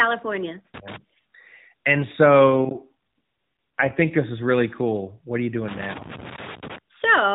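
Loose connector crackle appears first from 0.74 to 0.96 s: a short, irregular burst of scratching and popping. A worn or dirty contact is briefly making and breaking as it shifts, chopping the signal on and off, and any DC on the line turns each break into a small click.

An AMR rate drop follows from 2.50 to 4.13 s, just before "this is really cool". The speech stays within the same telephone band, with nothing above 4 kHz, and there is no gap, but it turns buzzier and more synthetic. This points to the mobile codec stepping down from about 12.2 kbps to about 5.9 kbps so that more of a weak radio link goes to error protection. The texture eases once the higher rate returns.

Loose connector crackle returns from 5.68 to 6.78 s, right after "are you". This burst is longer than the first, about 1.1 s of erratic scratching as the faulty contact keeps cutting in and out.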